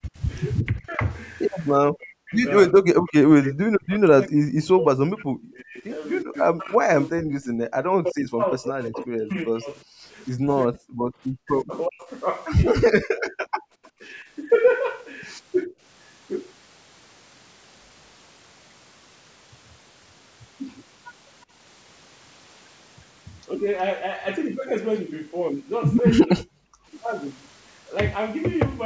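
Right from the start, 0.0 to 1.03 s, the talker's level sags by something like 15 dB for about half a second in total. It gets much worse from 1.96 to 14.26 s, where roughly seven seconds of that stretch are pushed down, at worst by around 40 dB, so the voice dips and chops out in pieces. That's speech suppressed in double talk: with both ends talking at once, the echo canceller likely couldn't tell the local voice from the loudspeaker echo and clamped down on both. Two brief blips of it come later, a small dip around 15.65 to 15.74 s and a deep one of about 40 dB from 26.23 to 26.97 s.

Inside that long stretch there are also two moments of background gated by the echo canceller, 7.44 to 7.65 s at about 40 dB down and 13.68 to 13.93 s at about 34 dB down. Each lasts about 200 ms. Here the canceller slams the microphone shut while the far end plays through the speaker, so the room tone suddenly drops to near silence and then pops back once it releases.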